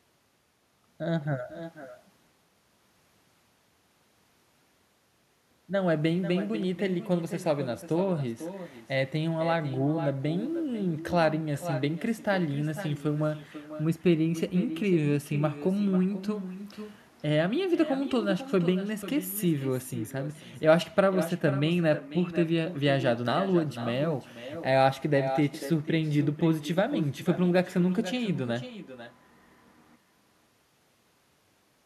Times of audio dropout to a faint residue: none

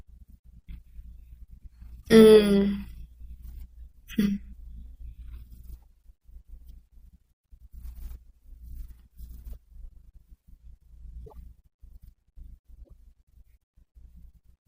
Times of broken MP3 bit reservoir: 2.00-2.08, 11.24-11.33, 12.83-12.91

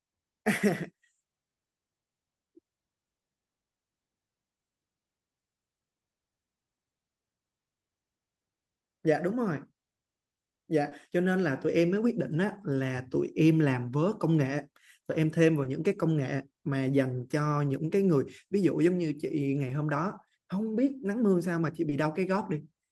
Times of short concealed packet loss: 10.89-10.93, 15.63-15.67, 19.67-19.71, 21.89-21.93

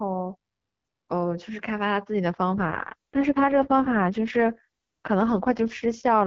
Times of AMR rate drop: 2.54-6.26

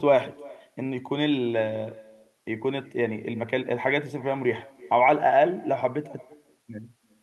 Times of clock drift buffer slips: none

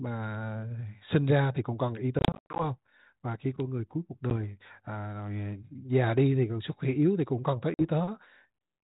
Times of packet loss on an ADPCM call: 2.19-2.65, 4.30-4.32, 7.74-7.84

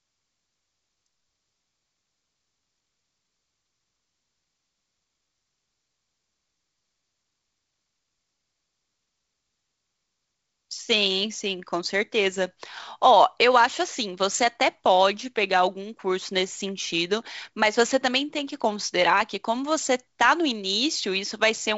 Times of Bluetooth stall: none

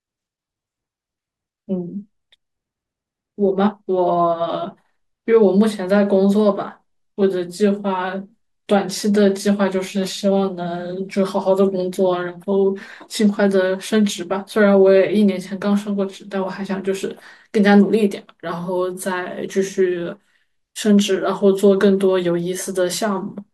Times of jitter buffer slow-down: none

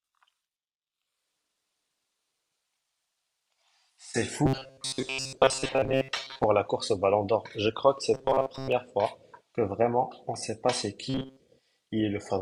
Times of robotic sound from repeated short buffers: 4.46-6.46, 8.14-8.72, 11.10-11.40

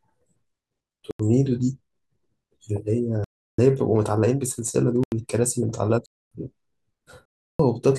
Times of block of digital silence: 1.11-1.19, 3.24-3.58, 5.03-5.12, 6.06-6.31, 7.25-7.59

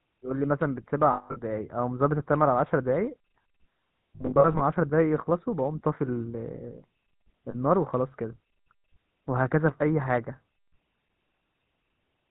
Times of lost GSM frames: 1.12-1.38, 4.16-4.62, 7.50-7.55

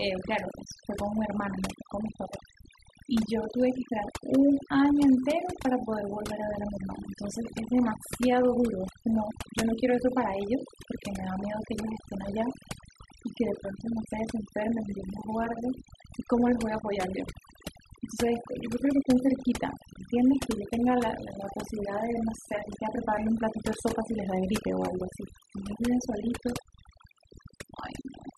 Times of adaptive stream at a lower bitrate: none

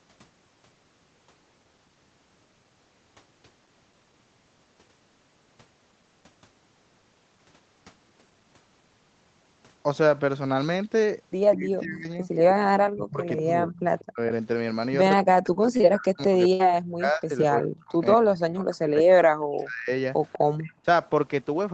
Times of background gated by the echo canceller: 20.72-20.85

